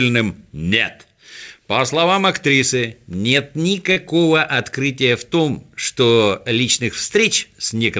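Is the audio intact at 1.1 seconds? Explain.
Yes, the audio is intact at 1.1 seconds, with no dropout, glitch or distortion there, only the normal band-limiting of the call path, which leaves nothing above 8 kHz, as fits a wideband codec such as G.722.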